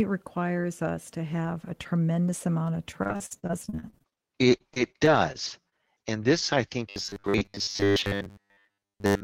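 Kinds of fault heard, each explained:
Repeated packet loss (robotic sound): from 2.91 to 4.18 s, and more lightly from 4.58 to 5.74 s, the audio keeps dropping out in short holes of up to 47 ms, each patched by stretching the preceding sound.
Robotic sound from repeated short buffers: from 6.89 to 9.23 s most of the sound becomes a rigid metallic buzz near 100 Hz, likely from a 10 ms chunk being repeated while newer audio is skipped. Its fixed, constant pitch separates it from irregular packet dropouts.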